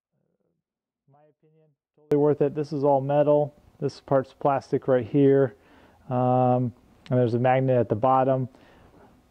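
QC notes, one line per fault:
0.00–2.12 s, audio dropout to a faint residue. The clip opens with the dropout already under way. For the first two seconds only a faint leak of the sound remains, about 40 dB below its normal level. At 2.12 s the full signal returns abruptly, with no fade. The likely cause is a break in the wanted signal while the path after it stayed live. That is why a weak residue stays audible rather than true silence.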